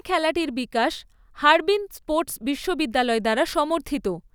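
Speech recording with no audible technical faults.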